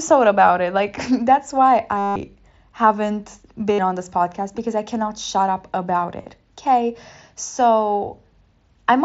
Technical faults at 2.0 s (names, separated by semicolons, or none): concealed Bluetooth headset packet loss